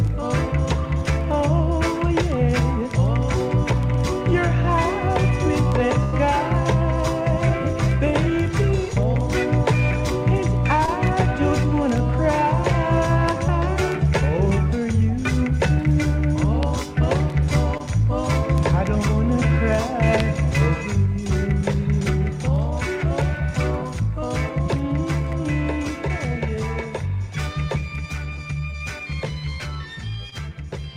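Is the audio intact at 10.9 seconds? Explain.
No. From 10.86 to 10.89 s there is a short concealed packet loss: about 20 ms of the stream never arrived in time, and the receiver covered roughly 13 ms of that by extending the preceding sound before blending back into the real signal. It comes across as a brief smear or wobble. Unlike a plain dropout, the hole is not left silent; the gap is papered over, so the fault shows as a blur rather than a clean cut.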